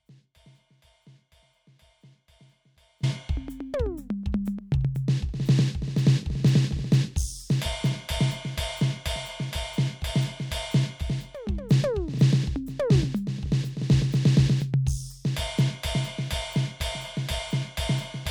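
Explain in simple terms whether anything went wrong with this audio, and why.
The opening of this music has an audio dropout to a faint residue. From the very start until 3.03 s, only a faint sound is heard, far below the music's normal level, before the music snaps back abruptly. The likely cause is a brief signal loss while the recording chain stayed live.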